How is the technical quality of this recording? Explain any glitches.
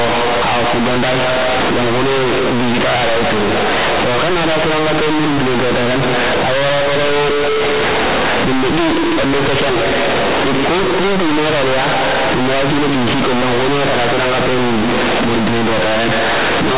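The quality is poor: companded audio read as linear runs throughout the speech. The A-law bytes, from an 8 kHz telephone stream, are played as plain linear 8-bit samples without expansion, so every sign change jumps across half the range. The result is very loud, buzzy distortion with heavy noise in pauses. Unlike ordinary clipping, the quiet passages are as loud and harsh as the peaks.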